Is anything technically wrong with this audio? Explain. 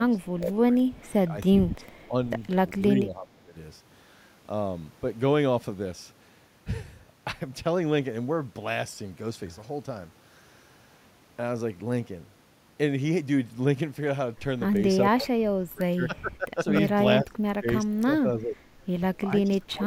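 Yes. From 0.05 to 3.55 s and again from 15.15 to 19.86 s, the speech dips and breaks up. This is likely speech suppressed in double talk, where the echo canceller ducks the talker during overlap. Drops reach about 20 to 25 dB, visible as gaps and thinned high bands on the spectrogram.

Between 0.21 and 2.07 s there is a faint echo leak, likely a residue the canceller missed. It trails the voice by 388 ms at about 35 dB down, showing as weak repeated energy on the spectrogram.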